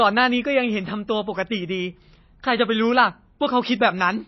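Speech, with MP3 compression damage throughout. Nothing is heard above 5.8 kHz, so the top is dull. Weak detail flickers on and off, giving a watery, swirly texture. The damage is plainly audible, which fits a likely low bitrate of about 24 kbps.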